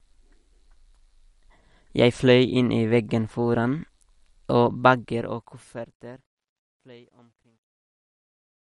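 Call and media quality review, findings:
MP3 compression, throughout. Watery, swirling texture on the speech, plainly audible; no content above 11.1 kHz. Likely cause: MP3 encode at a low bitrate, consistent with about 48 kbps. Encoder starved of bits drops weak frequency lines frame to frame and cuts the top band at a fixed point.

Truncation distortion on a fade, 4.79 s to end. Fade turns gritty as level drops, worst from 6.58 s onward. Volume or fade stage keeping too few bits, consistent with a 12-bit path, without dither. Quiet waveform collapses into coarse steps.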